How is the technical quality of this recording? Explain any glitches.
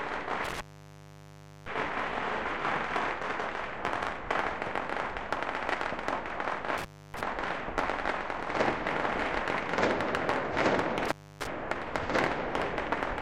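The recording suffers from an intermittent contact that breaks the signal three times: 0.45 to 1.68 s (open for about 1.05 s), 6.78 to 7.21 s, and 11.05 to 11.47 s (each open for about 0.29 to 0.30 s). A loose plug or cable conductor momentarily separates, so the audio cuts out with crackle at each edge as the contact makes and breaks, leaving faint hiss. This distinguishes it from a digital dropout, which falls to clean silence without scratchy edges.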